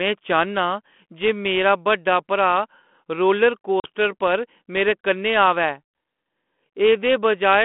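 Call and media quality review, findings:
Packet loss on an ADPCM call, 3.80–3.87 s: hard-edged 40 ms silent hole, about two packets. Unlike a plain dropout, the decoder's predictor and step size desynchronise, so the sound returns slightly distorted, settling within tens of milliseconds. The band-limited, lightly coloured G.726 path fits 32 kbit/s.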